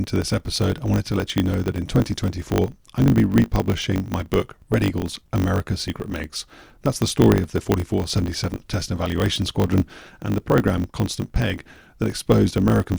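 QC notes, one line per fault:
Throughout, block size mismatch (truncated): a steady 50 Hz buzz sits under the speech, which runs 1.07 times fast at near-normal pitch. It fits 1024-sample blocks written into a shorter read, with each block's tail discarded at the block rate.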